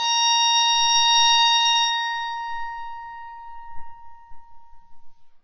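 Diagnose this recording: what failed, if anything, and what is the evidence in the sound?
The codec stage is where this went wrong, and it's audible through the whole music clip: nothing comes through above about 6.5 kHz, so the top end is just gone, and what's left sounds dull and smeared, with a warbly, fizzy edge on sustained material. That's the signature of heavy AAC compression, likely AAC-LC at a very low bitrate, something around 16 kbps, starving the encoder so it drops the highs and coarsely quantises everything else.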